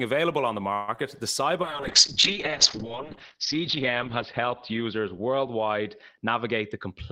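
Right after "available on the", from 0.73 to 0.89 s, the speech stalls and the last sound carries on as a fading buzz or hiss for about 150 ms, then resumes where it left off with nothing lost. This is a call audio freeze, likely from packets held up in transit until the jitter buffer ran dry.

Just after, from 0.96 to 0.98 s, a brief smear marks short concealed packet loss. About 10 ms of audio never arrived in time. The receiver extended the preceding sound to fill the gap, then blended back into the real signal.

From 1.63 s to the end, the speech turns muffled and rough. This is a call bitrate drop from 32 to 10 kbps. The lower bandwidth estimate forced coarser coding and pulled the top of the spectrum down from 20 kHz to 6 kHz. The lowest rate held for about 1.9 s.

From 6.23 s to the end, the speech sounds hurried at an unchanged pitch, running at about 108% speed. This is a jitter buffer speed-up. 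The buffer held more audio than its target, so the receiver trimmed pitch-period slices, roughly 70 ms in total, to reduce the delay.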